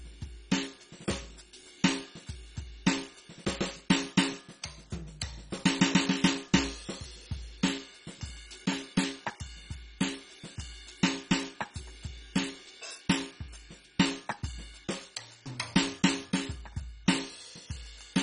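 Music with heavy MP2 compression throughout: nothing above 10.3 kHz, flickering upper sub-bands and a dull, gurgling grain, likely from Layer II coding at a rate fitting 32 kbps.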